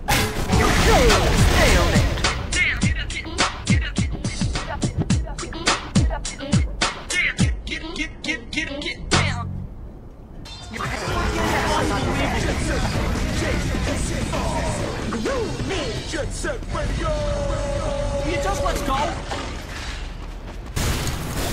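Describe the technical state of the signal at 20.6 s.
At 20.6 s the signal is intact, with no audible dropout, distortion, noise burst or other technical fault.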